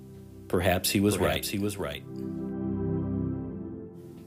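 From 0.81 s to 3.03 s, a doubled audio track runs under the sound. A second full-band copy trails the original by about half a second. It sits a few decibels quieter, roughly 5 dB down. The copy carries no decay or room colour, so it reads as a clean repeat rather than an echo. It cuts in and out abruptly at both ends. The likely cause is the signal being captured twice, once through a slower path.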